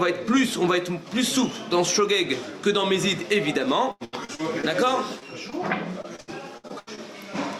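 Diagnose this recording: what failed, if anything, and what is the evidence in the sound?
Repeated packet loss (robotic sound) occurs from 3.91 to 4.65 s and again from 6.02 to 6.99 s. This is a network fault. Six and then seven holes, the longest 92 ms and 74 ms, were each patched by extending the preceding sound. About a third of each stretch is synthetic, so the audio turns choppy and robotic.

Short concealed packet loss appears at 5.19 to 5.23 s and 5.50 to 5.54 s, also a network fault. Each time about 20 ms failed to reach the decoder in time. The receiver continued the last sound across the hole and blended back, leaving a brief smear or wobble.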